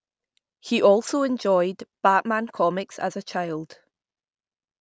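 No technical faults can be heard in this speech recording.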